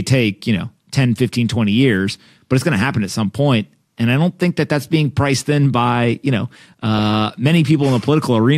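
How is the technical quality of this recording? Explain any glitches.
The recording has one clear glitch, a short stretch of digital radio corruption in the speech.

From 6.74 to 7.16 s, right after "in by you know", there is DAB burbling. Weak reception lets bit errors at a rate of a few tenths of a percent slip past error correction into the MP2 data, and the sound points to roughly 20 damaged frames. Corrupted samples put short blips of noise into individual sub-bands, and corrupted scale factors make sub-bands jump in level for up to a frame, giving a burbling, blippy disturbance over the voice. On a spectrogram this shows as blocky horizontal patches flickering on and off in separate frequency bands. The waveform has uneven bursts over those 0.42 s.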